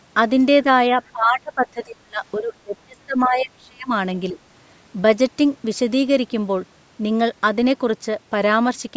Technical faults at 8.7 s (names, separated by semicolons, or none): none